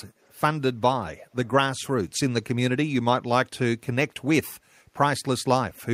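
Speech recording with a brief echo leak between 0.21 and 0.39 s: a very faint copy of the speech, roughly 40 dB down, trails the direct sound by 263 ms, most likely residue that a far-end loudspeaker echo canceller failed to suppress and returned down the line.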